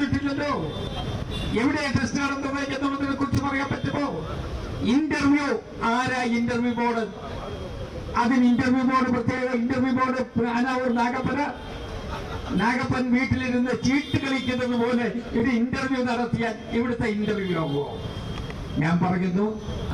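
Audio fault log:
3.35–3.37 s, 9.37–9.40 s, 15.40–15.42 s: overlapping chunks. The audio is handled in blocks about 6.0 s long, and each block begins about 25 ms before the previous one finishes. At every join that short stretch plays a second time, so the sound briefly doubles back on itself. The repeat lands as a click or stutter, and because the blocks are a fixed length, the stutters recur on a steady six-second beat.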